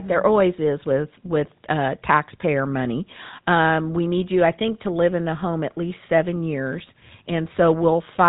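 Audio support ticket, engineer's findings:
Whole clip, speech: GSM full-rate codec. Buzzy, gravelly roughness throughout, plainly audible. Vocal-tract model driven by regular pulse excitation, only every third sample kept. Top end gone, nothing above 3.8 kHz. Sounds like roughly 13 kbps telephone path.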